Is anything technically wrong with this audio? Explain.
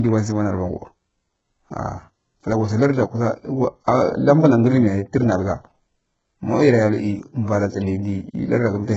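Yes. Throughout the speech, the highs sound heavily damaged: gritty, metallic s sounds and no content above 7.8 kHz. This is likely HE-AAC compression near 8 kbps, rebuilding the treble from copied lower bands.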